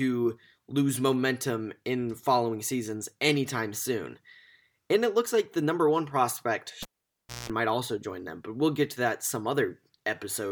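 At 6.83 s, after "the number one prospect", a pop marks the cable pulled and plugged in. Near silence lasts 0.62 s. Then 60 Hz buzz for 0.18 s, and a pop before "might also join them".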